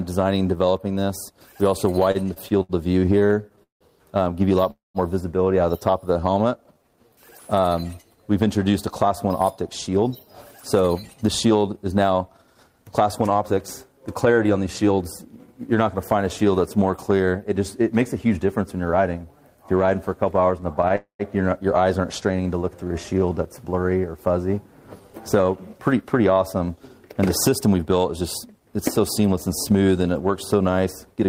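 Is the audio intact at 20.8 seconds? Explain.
No. Between 20.61 and 20.93 s, packets reached the receiver late, so its jitter buffer kept running dry. That is repeated stalls (stutter). Four times it ran out, and each time the receiver held the last sound going until data resumed, filling about 47 ms in all, with the longest hold 13 ms. Nothing is lost, but roughly 15% of that span is stretched filler, so around 20.8 s the audio drags and stutters.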